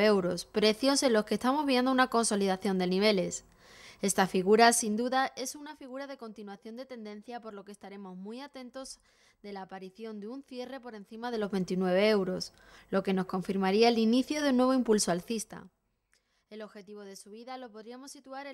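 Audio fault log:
4.55–5.76 s, 11.15–11.61 s and 15.05–16.16 s: zipper noise. The level shifts roughly 15 dB down, 15 dB up, then 20 dB down, in unsmoothed jumps of about 1, 3 and 2 dB, around ten a second. Each jump clicks, so a ticking rides on the move.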